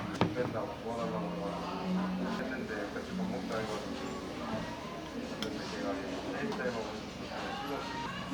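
An everyday-sound recording with damaged data in a compressed stream. Brief blips occur at 0.16, 2.39 and 8.06 s, with a longer one from 5.60 to 5.64 s. Corrupted bytes made the decoder misread frames, lose sync and hunt for the next header.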